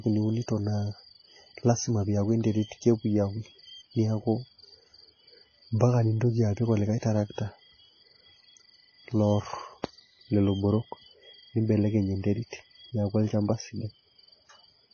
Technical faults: MP3 compression

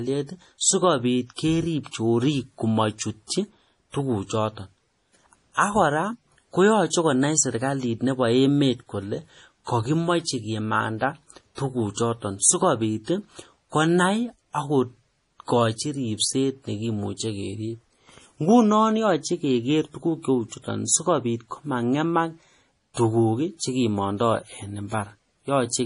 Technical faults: MP3 compression

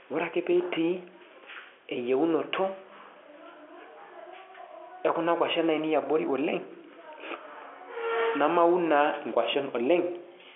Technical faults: none

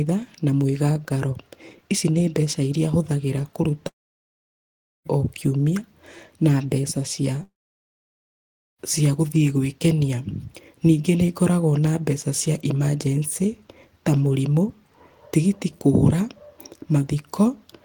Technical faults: long network dropout

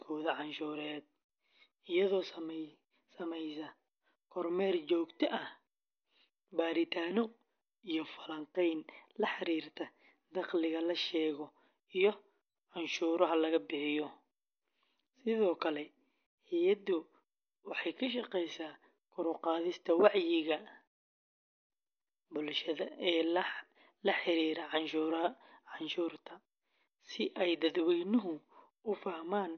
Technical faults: MP3 compression

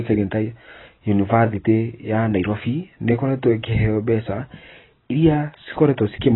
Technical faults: AAC compression

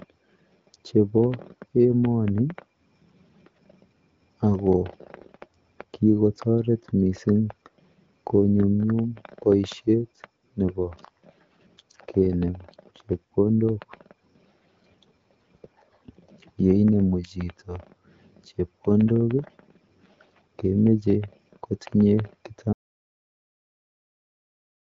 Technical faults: audio dropout to silence

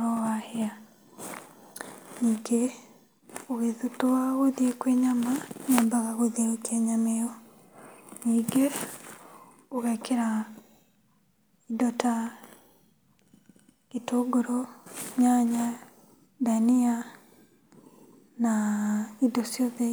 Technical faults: none

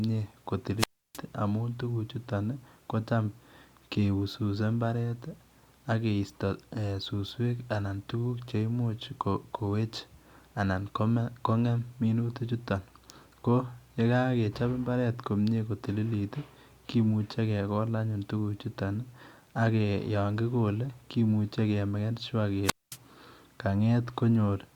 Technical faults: wireless microphone squelch dropout

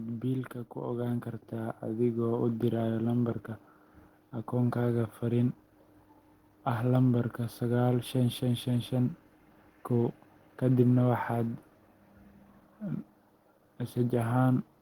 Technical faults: automatic gain rising

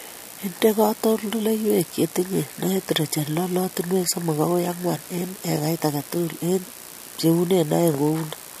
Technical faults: periodic USB or driver dropouts

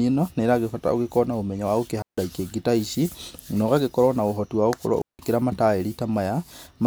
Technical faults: digital wireless dropout

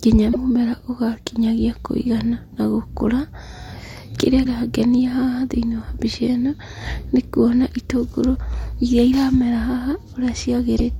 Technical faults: damaged data in a compressed stream

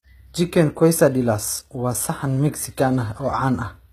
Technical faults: HE-AAC compression

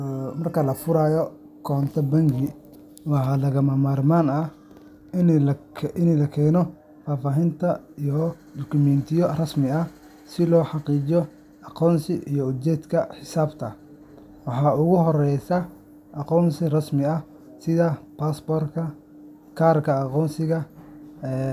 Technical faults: none

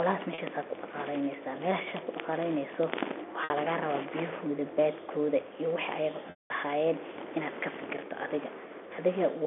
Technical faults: packet loss with pitch repetition

